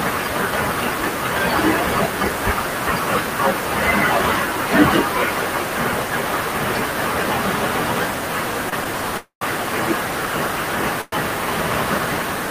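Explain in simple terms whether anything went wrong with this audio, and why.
Something went wrong in three ways.

Low bit depth without dither: the recording was most likely stored with only about 5 bits per sample, with the extra detail simply chopped off and no dither noise added to smooth the rounding. With so few steps, the error follows the speech itself, so the whole clip sounds grainy and gritty. The distortion is strong, though still clearly quieter than the speech, and quiet parts break up or sputter instead of fading smoothly.

Short stall from a late packet: at 8.69 to 8.74 s, one piece of the call data arrived late, and the receiver had nothing new to play. It stretched the last sound by about 27 ms until the data caught up, then carried on from the same spot. Nothing is lost, but that moment is briefly drawn out, with a slight buzz or dip.

Call audio freeze: this was likely caused by data being held up on its way, leaving the receiver's waiting store empty. 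From 9.17 to 9.43 s it filled about 240 ms by continuing the last sound as a fading buzz or hiss, and the second half of that is silence. From 11.01 to 11.14 s it filled about 109 ms the same way, with no silent part. Each time, the speech resumes where it stopped, so a pause is inserted rather than anything cut out.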